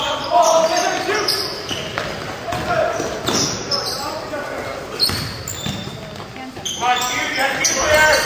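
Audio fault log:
No fault to log for this clip.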